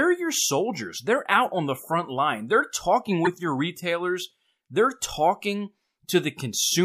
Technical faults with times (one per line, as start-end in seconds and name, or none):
3.25-3.27 corrupt frame decoded